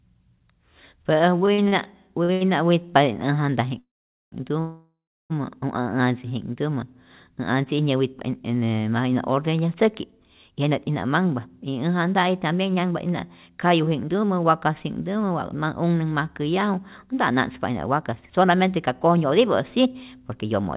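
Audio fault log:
1.46–1.87 s, repeated stalls (stutter): Four short holds break up the speech over this span, the longest about 44 ms, with 114 ms of filled-in audio making up 28% of the stretch. Packets were reaching the jitter buffer late, so it kept running dry, and each time the receiver extended the last sound until data resumed. Nothing is lost, but the speech drags and stutters as it is repeatedly paused and restarted.
2.23–2.31 s and 2.33–2.43 s, short stall from a late packet: Two closely spaced holds, 52 ms and then 81 ms, each stretch a sound longer than it should last, with a faint buzzy or dipped quality. In each case a packet missed its playout time, the jitter buffer emptied, and the receiver sustained the previous sound until the packet arrived, then continued from the same point. No speech is dropped; the delay grows by the length of each hold.
3.79–4.34 s and 4.60–5.32 s, call audio freeze: The speech stalls twice, for about 0.53 s and 0.70 s. 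Each time the last sound is carried on briefly, band-limited to 4 kHz like the rest of the call audio, then fades into silence lasting 460 ms and 340 ms respectively. The likely cause is packets held up in transit, draining the jitter buffer until they arrived. Speech then resumes where it left off, so gaps are inserted rather than content removed.
10.52–20.61 s, jitter buffer speed-up: Across this stretch the speech runs at about 107% of normal pace with its pitch unchanged, giving a slightly hurried delivery. Having built up more buffered audio than its target, the jitter buffer trimmed small pitch-period-sized slices repeatedly to bring latency back down, removing roughly 0.7 s in total. The sped-up rhythm is what gives the speech its rushed feel.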